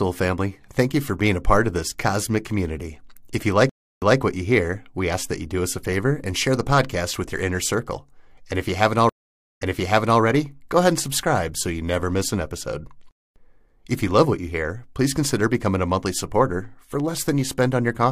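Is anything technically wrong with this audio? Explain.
Yes, there are two stream reconnects. At 3.69 to 4.19 s the speech drops out for 314 ms, then resumes 186 ms earlier, repeating a short stretch before "what you hear we". At 9.09 to 10.21 s, after "if you haven't", there is 509 ms of silence, and playback jumps back 604 ms before "go ahead and subscribe". Both times the connection broke, the player reconnected, and a fresh decoder restarted mid-stream from resent data.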